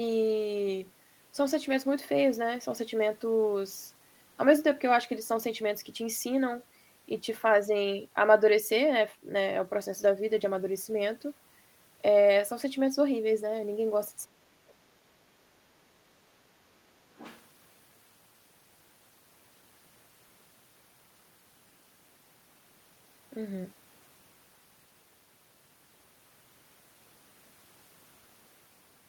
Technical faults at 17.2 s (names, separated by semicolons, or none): other side's voice leaking through